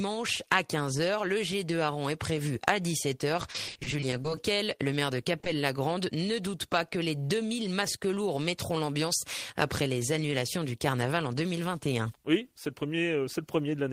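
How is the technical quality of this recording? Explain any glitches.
The recording has clear network-transmission damage between roughly 3.4 and 5.5 s, in three separate kinds.

From 3.41 to 4.39 s there is repeated packet loss with a robotic sound. About a dozen short dropouts, none longer than 40 ms and about 200 ms missing in total, each get patched by extending the preceding waveform. About 270 ms of synthesized fill ends up covering roughly 28% of that span. Because the holes arrive in quick succession, the concealment never settles, and the sound turns choppy, with fragments missing.

Overlapping the end of that stretch, from 4.30 to 4.78 s, there is a jitter buffer slow-down. The receiver, short on buffered audio, stretches playback by repeating small waveform segments, adding 54 ms. The sound plays at about 91% speed with unchanged pitch. Sounds are audibly drawn out.

At 5.40 s and again at 5.44 s come two back-to-back instances of short concealed packet loss, each 20 ms. 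The decoder fills each gap by continuing the last sound and then crossfading into the real signal. Heard together, they produce a brief smear or wobble lasting about 80 ms, where a short transient can drop out.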